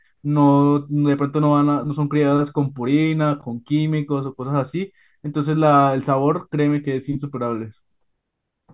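No technical faults can be heard anywhere in this speech recording. There is nothing to place on the timeline.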